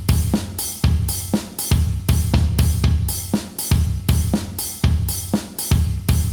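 Nothing is technically wrong with this audio.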